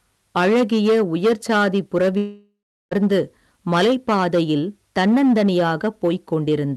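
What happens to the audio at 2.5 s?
At 2.5 s the audio is inside a gap that sounds like a long network dropout. It begins at 2.17 s, right after "அழகிய உயிர்சாதிப்", and lasts until 2.93 s. The receiver stretches the last sound into a fading buzz. Then about 0.37 s of near silence follows. The audio returns at 2.93 s, but about 0.74 s of it never comes back. Packets were likely lost in transit.

Hard clipping also runs through this moment, as it does through the whole clip. The signal is driven about 10 dB past what the chain can pass. Around 7 percent of samples hit the ceiling and are cut flat. Those flat tops add high harmonics. Every loud part of the speech gains a harsh fuzz.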